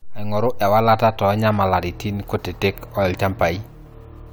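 No technical faults can be heard anywhere in the speech recording, which stays intact and stable throughout.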